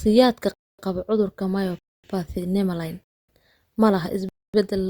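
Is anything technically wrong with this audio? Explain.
Yes. Gaps between chunks occur at 0.54, 1.79, 3.04 and 4.29 s, each 250 ms, just before "qaba cudurka" and around "ma laha". Each one-second chunk of the speech is followed by silence, so the sound is interrupted by short holes at regular intervals.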